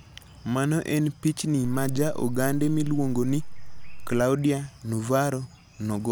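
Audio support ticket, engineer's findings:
DC step, 1.65 s to 4.21 s, just after "en pichni". Low thump at onset, second thump at 4.21 s when offset returns. Zero line jumps by about -29 dBFS and holds, then steps back. Likely converter recalibration or offset input switched in. Waveform: whole trace displaced off centre for the span. Spectrogram: thin broadband vertical streak at each edge, sub-bass energy at the transitions. Speech itself continues unchanged through the offset.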